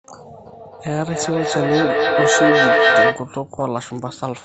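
A speech recording in which, from 0.46 s to 3.39 s, each phrase returns roughly every third of a second, thinner and more metallic on each pass. The repeats build up rather than fade, peaking at about 6 dB above the speech itself. This is feedback echo between two devices. A second device in the room replays the call, and the first microphone picks it up again, beyond the reach of either echo canceller.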